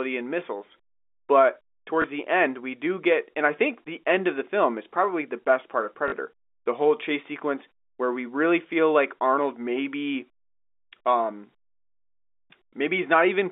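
Speech over what sounds like a G.711 phone line, with two packet losses where the last packet was repeated: a 20 ms blip at 2.02–2.04 s just before "the end we do", and a buzzier 40 ms one at 6.08–6.12 s right after "the best part of", which fits 20 ms packets.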